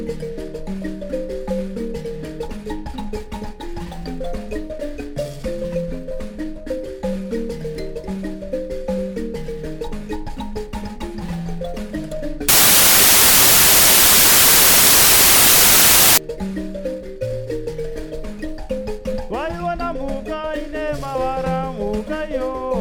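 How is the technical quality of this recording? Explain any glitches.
One fault affects the recording. From 12.49 to 16.18 s there is a wrong sample width. Bytes are grouped into the wrong-sized samples, so most values are garbage. Loud noise buries the sound, which plays slowly at 0.75 speed and lower pitch. This fits 32-bit data read as packed 24-bit.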